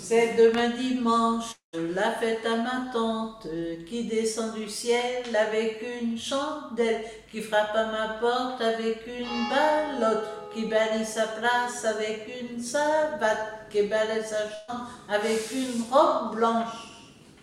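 At 1.51 s the stream most likely suffered a long network dropout: for roughly 220 ms no audio reached the player, and that stretch is gone for good. The receiver tried to bridge the hole by carrying the last sound forward, so a brief smeared continuation fades out and gives way to about 130 ms of dead silence. At 1.75 s the audio picks up again further along, skipping whatever fell inside the gap.

At 14.55 s a burst of packet loss removes about 140 ms of audio, which either never arrived or came too late to be played. Here concealment fills almost the whole hole, about 132 ms, by extending the preceding sound and steadily turning it down, so there is no silent stretch. Instead a held, fading buzz or hiss replaces the missing material until playback jumps ahead at 14.70 s.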